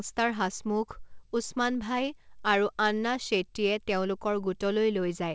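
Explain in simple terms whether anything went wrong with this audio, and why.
Nothing went wrong; it sounds like an ordinary call.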